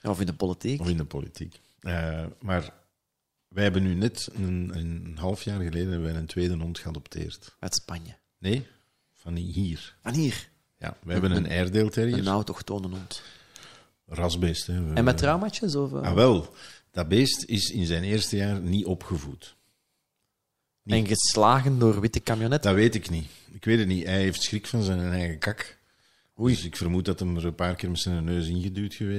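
At 14.62 s there's a single sharp click in the speech, a quick tick with a thin vertical line straight up the spectrum. That's most likely dropped samples: a handful of samples, well under a millisecond's worth, went missing, so the waveform jumps from one value to a later one instead of flowing through. The gap is far too short to take out any of the sound itself. What you hear is that abrupt step.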